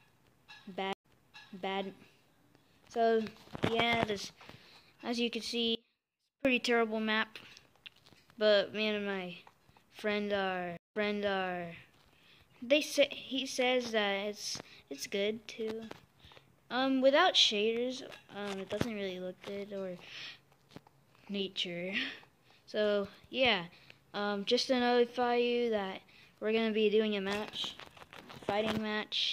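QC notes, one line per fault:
0.93–1.78 s and 10.77–11.70 s, stream reconnect: the sound breaks off into silence, about 98 ms the first time and 167 ms the second. It then resumes 758 ms earlier than where it stopped, so roughly three quarters of a second is heard twice. This is what happens when a player loses its connection and starts a fresh decoder on material the server resends. On a waveform each event is a flat gap followed by a soft or muted onset. A spectrogram shows a clean vertical blank, then a repeat of the preceding pattern.
5.75–6.45 s, audio dropout to a faint residue: the sound cuts out abruptly for about 0.7 s with no fade, leaving only a faint trace about 30 dB below the normal level before returning just as suddenly. This is likely a break in the wanted signal while the path after it stayed live and carried a weak leak. On a waveform the envelope collapses to a thin band with hard edges. 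On a spectrogram the same structure continues, but much dimmer, across the gap.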